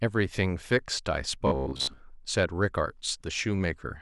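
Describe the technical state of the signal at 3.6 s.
At 3.6 s the speech signal is intact, with no audible fault at that moment.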